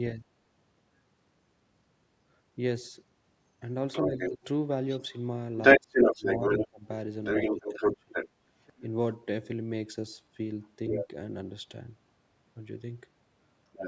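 Other side's voice leaking through, 3.92 to 4.30 s: a second voice sits about level with the talker, likely because the echo canceller missed part of the far end's loudspeaker playback picked up by the microphone. It returns from 4.88 to 6.67 s noticeably louder than the talker, from 7.24 to 8.81 s somewhat louder, from 10.62 to 11.08 s at a similar level, and from 13.72 s to the end slightly quieter.

Speech suppressed in double talk, 4.06 to 4.45 s, 5.78 to 6.85 s and 7.51 to 8.15 s: while both sides overlap, the talker's voice dips sharply, by roughly 20 to 25 dB at its deepest, for brief stretches. The likely cause is the echo canceller turning everything down when it cannot separate near and far speech.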